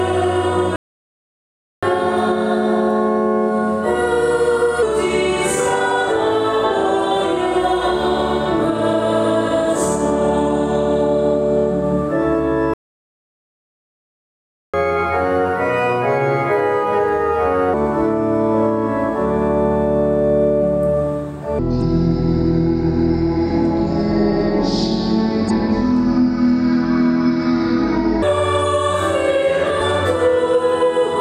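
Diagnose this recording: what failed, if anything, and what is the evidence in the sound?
The audio cuts to silence mid-flow from 0.76 to 1.83 s (about 1.07 s) and again from 12.74 to 14.74 s (2.0 s), then resumes. This playback stall is likely the player's buffer running dry or its output thread being blocked, starving the device until data returned.

Right after each gap the sound runs hurried and sharp: from 1.83 to 4.83 s at 1.1x speed, about 1.5 semitones high, and from 14.74 to 17.74 s at 1.25x, roughly 4 semitones high. This is catch-up at higher speed. The player resamples its backlog faster to recover the lost time, then returns to normal rate.

From 21.59 to 28.22 s everything turns deep and sluggish, running at 0.564x speed and dropping roughly ten semitones. This section at the wrong speed likely comes from an editing or playback stage applying a mismatched clock, so speed and pitch fall together.

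Brief decoding glitches occur at 21.78–21.82 s, 25.46–25.51 s and 29.77–29.81 s, each about 40 ms. This is damaged data in a compressed stream. Corrupted bytes make the codec misdecode or reject those frames while it resynchronises on the next valid frame header.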